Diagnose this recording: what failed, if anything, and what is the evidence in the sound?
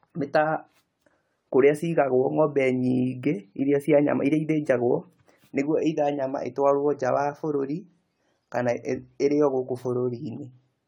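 The failure sits at the codec stage, and it runs through the whole speech recording. The sound is swirly and hollow, with smeared consonant attacks. Yet the bandwidth still reaches about 20 kHz, which fits a decent AAC-LC rate around 96 kbit/s. A single low-bitrate encode would roll off the top end. Here the damage is likely generation loss from roughly ten successive encode passes, each requantising on a shifted frame grid so noise and spectral holes accumulate.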